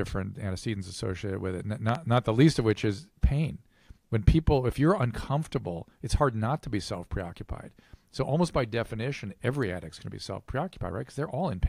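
At 1.89 to 1.97 s there is a loud pop, heard as two sharp thumps in quick succession standing well above the surrounding level, roughly 15 dB over it at the peak. The cause is likely an electrical pulse, such as a plug, switch or static discharge, added onto the signal. Unlike a dropout click, the sound carries on unbroken beneath both pops rather than cutting out.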